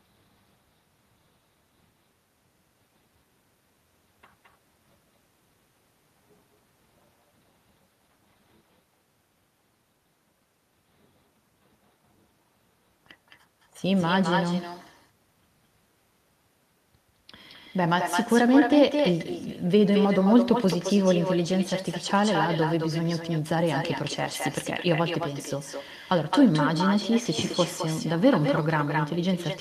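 From start to end, echo with no canceller: the far end's loudspeaker feeds its microphone. Each phrase returns about 7 dB quieter, roughly a fifth of a second later, and thin.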